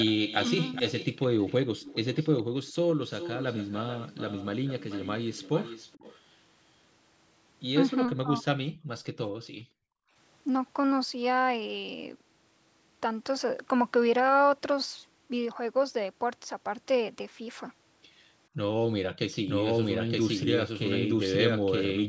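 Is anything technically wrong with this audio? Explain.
Yes, several faults are audible in this speech clip.

From 0.00 to 2.72 s and again from 3.09 to 6.19 s there is an echo leak. A faint delayed copy of the speech trails about 413 ms and then 438 ms behind, roughly 15 dB down. This is likely a far-end loudspeaker whose echo canceller failed to remove what its microphone picked up. On a spectrogram it shows as weak, shifted repeats of the speech contours.

From 8.1 to 8.43 s the speech is suppressed in double talk. For about 200 ms in total the voice dips by roughly 15 dB in pieces, likely because an echo canceller could not tell this talker from loudspeaker echo and turned both down. The waveform shows short notches in the speech envelope.

The background is gated by the echo canceller from 8.71 to 8.89 s, dropping by about 24 dB, and from 9.33 to 10.15 s, dropping by about 40 dB for roughly 700 ms. 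The room sound falls away while the canceller clamps the microphone and then returns. A spectrogram shows dark, near-empty bands across the noise floor.

From 19.48 s to the end the clip carries a doubled audio track. A full-band copy about as loud as the original follows about one second behind, with no decay or room colour. It is likely a second capture path or a misaligned edit. The spectrogram shows identical patterns repeated one second apart, and the copy starts abruptly.

The call's microphone processing limits the band to below 8 kHz, which is normal.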